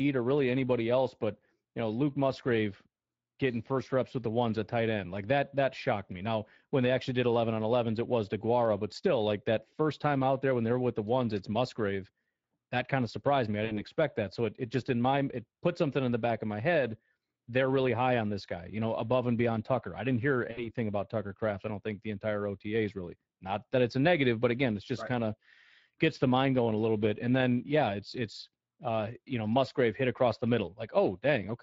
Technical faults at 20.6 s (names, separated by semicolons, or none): Speex codec; VoIP packet loss concealed by the speech codec